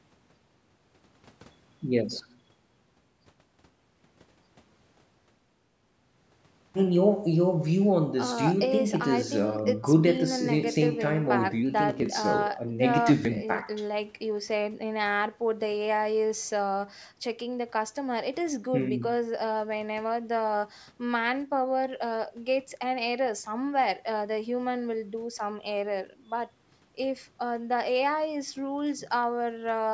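No faults are audible in this speech, which has passed through call microphone processing whose high-pass filter trims the lowest bass as intended and which carries nothing above 8 kHz.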